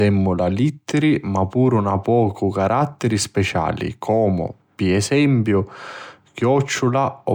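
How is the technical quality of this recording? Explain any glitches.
No glitches or technical faults are audible anywhere in the recording.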